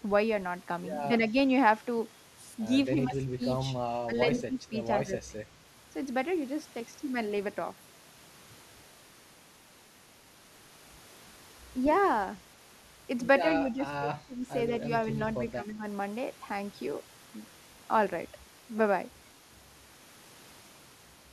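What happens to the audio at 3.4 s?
An echo canceller most likely misjudged a stretch of double talk. With both ends talking at once, it could not separate this talker from the loudspeaker echo, so it turned both down. The result is speech suppressed in double talk, from 2.94 to 3.42 s, ending right at 3.4 s. Across that span the speech dips and breaks up in pieces, about a fifth of a second in total, falling by around 15 dB at its deepest.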